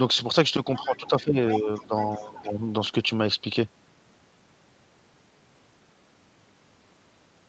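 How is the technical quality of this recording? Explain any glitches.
The recording has two related glitches in the first few seconds. Both come from a call's echo handling. The audio is speech, and its top end stops at 8 kHz, as the call path limits it.

Other side's voice leaking through happens twice. A brief scrap appears from 0.75 to 0.84 s, roughly 20 dB below the talker. A longer, stronger stretch runs from 1.5 to 2.5 s, only about 10 dB down. This second voice was likely played on the talker's loudspeaker, picked up by the microphone and not fully removed by the echo canceller.

Speech suppressed in double talk follows each leak. The talker's level dips from 0.79 to 1.38 s, 1.59 to 1.93 s and 2.18 to 2.64 s. Each drop reaches roughly 10 dB. The voice sounds pushed back. The likely cause is that the echo canceller could not tell the two voices apart. It turned everything down together.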